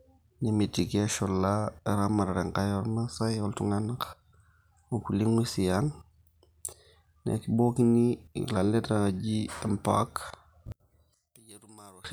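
Speech whose level falls away abruptly from 10.72 to 12.05 s, leaving a faint residue about 28 dB down. The likely cause is one channel inverted, so the centred sound common to both sides cancels in a mono sum. The waveform visibly shrinks there, and the spectrogram loses most of its energy.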